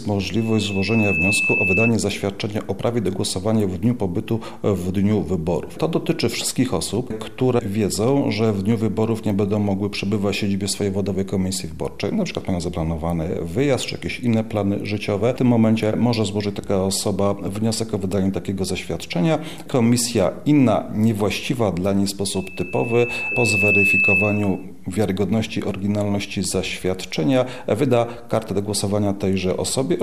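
Right at the start, from 0.36 to 1.93 s, there's a loudspeaker feedback squeal: a single tone at 2.6 kHz swelling up over about a second until it sits a few dB above the rest of the sound. The mic is catching its own loudspeaker, and at that frequency the loop gain has tipped past one. The same 2.6 kHz howl returns from 22.33 to 24.65 s, building a bit more slowly, over a second and a half or so.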